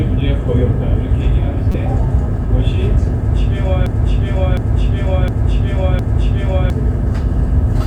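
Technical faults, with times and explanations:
1.72–1.75 s, corrupt frame decoded. A brief glitch cuts through the sound for about 30 ms. Bits inside a compressed frame were damaged, and the decoder played it anyway. Misread gains and codes pushed energy into frequencies where it does not belong. The glitch spans roughly a couple of frames, so it is short and sharp.
3.86–6.70 s, broken-record loop. A fragment of about 0.71 s plays four times in a row, back to back, with identical content each pass. The seams land at the same point every cycle, which gives the stuck, mechanical rhythm. The likely cause is a player, encoder or stream stalling and resending the last fragment it held. Whatever should have played during those nearly three seconds is gone.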